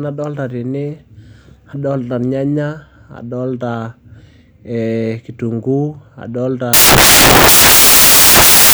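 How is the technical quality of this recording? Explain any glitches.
The recording has one serious fault at the end. From 6.73 s to the clip's end at 8.74 s, samples built from the wrong bytes turn the speech into loud, harsh broadband noise. Misassembled bytes let the fast-changing low bits dominate each value. The spectrogram fills across the frequency range, and the waveform becomes a dense block.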